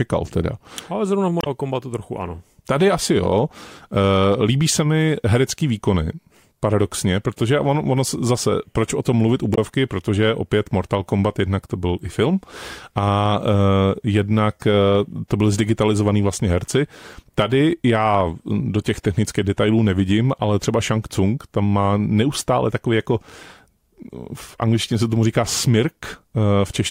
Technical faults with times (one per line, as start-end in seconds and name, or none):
1.38-1.47 damaged data in a compressed stream
9.52-9.58 damaged data in a compressed stream